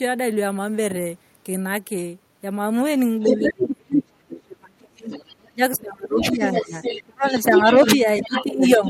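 An echo canceller that likely left part of the far end's loudspeaker sound in the microphone signal lets the other side's voice leak through. The leak runs from 3.21 to 4.02 s at roughly the talker's own level, faintly at 5.09 to 5.35 s, slightly below the talker at 6.2 to 7.08 s, and level with the talker again from 7.51 s to the end.

The same canceller, likely unable to tell its own talker from the echo while both sides spoke at once, turned everything down. The result is speech suppressed in double talk. The talker dips by roughly 30 dB between 3.24 and 5.1 s, by about 25 dB between 5.45 and 6.75 s, and by around 15 dB from 7.09 s onward.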